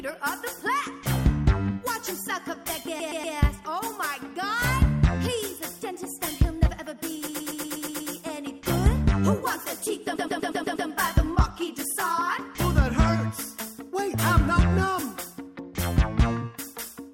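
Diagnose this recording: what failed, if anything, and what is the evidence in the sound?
Repeated frames in the codec or storage stage: a 120 ms block replays as a stutter at 2.99–3.35 s, 7.27–8.11 s and 10.15–10.87 s, adding 360, 840 and 720 ms.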